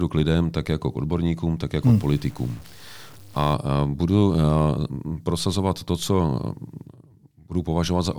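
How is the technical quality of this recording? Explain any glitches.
There is one clear glitch. From 1.83 to 3.54 s, after "jako k odborníkům tak" and before "budu eh", the speech turns grainy with low bit depth without dither, likely from truncation to about 7 bits. The error tracks the signal at roughly 30 dB down. On a waveform the quiet stretches show stair-stepped levels, and a spectrogram shows a broadband haze that follows the speech.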